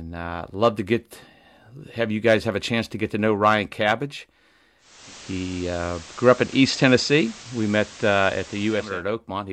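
A hybrid radio receiver in this speech clip lost its digital signal at 4.78 s and cross-faded over 0.38 s to the station's FM broadcast, returning at 9.04 s. This digital radio blending to analogue adds hiss about 20 dB below the speech and shifts the level by about 2 dB.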